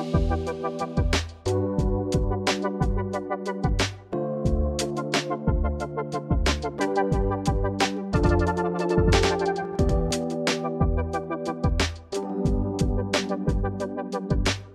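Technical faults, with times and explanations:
8.23–10.11 s, doubled audio track: a slower second capture path or an out-of-step edit likely mixed in another copy, roughly a tenth of a second late and about as loud, so the sound gains a dry, full-band slapback echo that cuts in and out abruptly.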